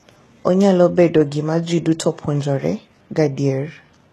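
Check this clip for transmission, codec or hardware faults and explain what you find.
One codec fault runs through the whole speech clip: HE-AAC compression is the likely cause, at a bitrate the sound suggests is very low, around 16 kbps. The codec keeps only the lower spectrum as real signal and synthesises the treble by copying lower bands upward under a coarse envelope, so the upper harmonics no longer match the voice's own. The damage is plainly audible. S sounds come out gritty and lispy, with a metallic edge, and nothing sounds above 12.4 kHz.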